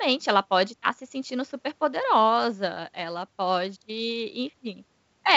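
No technical faults can be heard anywhere in the speech. It has come over a working WebRTC call path, and the band stops at 8 kHz with no content above it, which fits a G.722 call codec at 64 kbps.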